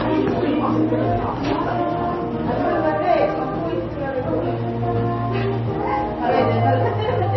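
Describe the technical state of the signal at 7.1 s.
At 7.1 s the sound carries the heavy damage of MP3 compression present throughout, with nothing above 5.9 kHz. Unlike a plain low-pass filter, the remaining band sounds watery and swirly as weak frequency lines flicker between frames, likely from a very low bitrate.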